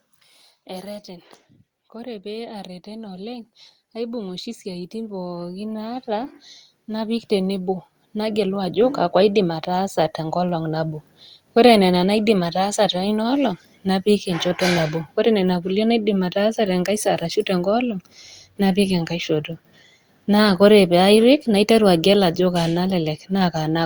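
Automatic gain rising runs from 0.66 s to 11.14 s: the gain control judged the input too quiet and kept raising its level, by about 20 dB in total. The speech and the background noise floor swell together, slowly and steadily, over those ten seconds.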